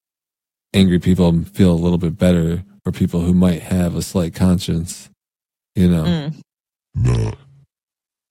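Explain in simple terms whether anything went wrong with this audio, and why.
From 6.81 s to 8.30 s, the playback was likely running on the wrong clock, at 0.69 times its real speed. This section at the wrong speed makes the speech slow and drawn out, and drops its pitch by roughly seven semitones.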